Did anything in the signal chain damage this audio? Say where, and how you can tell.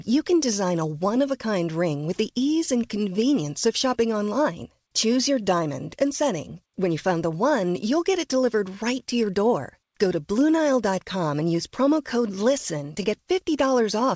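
No, nothing damaged it.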